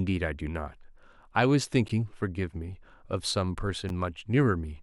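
At 1.88 s and again at 3.89 s, a gap between stream segments drops a hard-edged hole of 12 ms and then 10 ms into the speech. Each falls at a two-second segment boundary where the timestamps fail to meet, so the player pads with silence. On a waveform each shows as a flat, sharply cut break; on a spectrogram, as a thin, empty vertical stripe.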